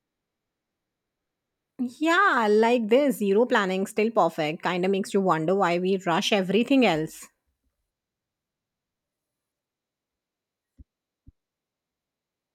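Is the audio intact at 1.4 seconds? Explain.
Yes, at 1.4 seconds the audio is intact, with no fault audible at that moment.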